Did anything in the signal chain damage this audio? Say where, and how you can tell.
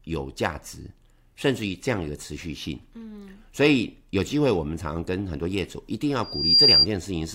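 Yes. The loudspeaker feedback squeal comes from the acoustic loop between the loudspeaker and the microphone feeding it, whose gain exceeded one at 4.8 kHz. From 6.23 to 6.87 s, that single tone swells for about a third of a second and ends roughly 10 dB above the speech.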